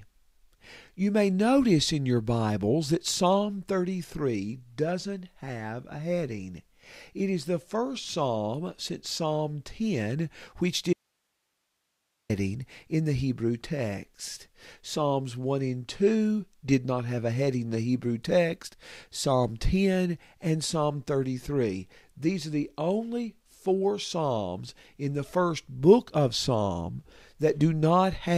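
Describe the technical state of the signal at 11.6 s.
Audio dropout to a faint residue, 10.93–12.30 s: the speech likely lost its source while the path stayed live, leaving only hiss about 50 dB down before "in the".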